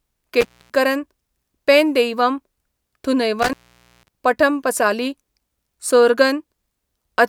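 At 0.41 s and again at 3.39 s the speech cuts out through an intermittent contact, a loose plug or cable briefly opening the line, for about 250 ms and then about 510 ms. Crackle at both edges and faint hiss beneath the gap distinguish this from a clean digital dropout.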